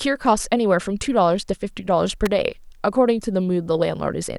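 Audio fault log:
2.26 s, electrical switching spike. A sharp snap lands on top of the speech. It lasts about a hundredth of a second and peaks around -10 dBFS. A nearby switch or static discharge arcing into the audio line is the likely cause.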